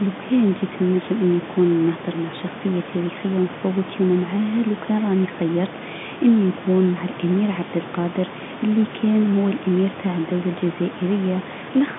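Nothing goes wrong anywhere in this speech, which comes through a normal telephone line limited to about 150 Hz to 3.6 kHz, with only the room's own background noise sitting roughly 12 dB beneath it.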